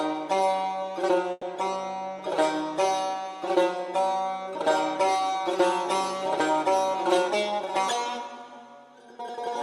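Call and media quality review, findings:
Call audio freeze, 1.31–1.44 s: audio stalls, last sound extended as fading fill for about 110 ms, ending in 10 ms of silence. Likely an empty jitter buffer. Unlike a dropout, playback resumes where it stopped, with nothing missing.

Jitter buffer speed-up, 6.95–7.77 s: audio runs at 108% and sounds hurried, but pitch is unchanged, unlike a sample-rate error. Repeated pitch-period cuts remove about 70 ms to trim an overfull buffer.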